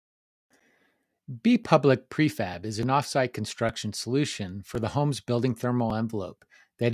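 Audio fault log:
Nothing stood out on listening to the speech.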